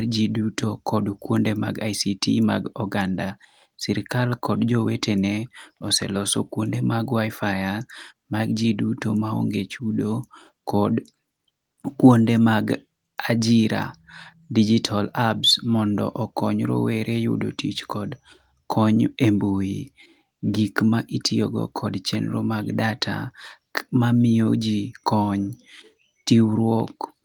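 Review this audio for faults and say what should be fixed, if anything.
No faults found; nothing here needs fixing.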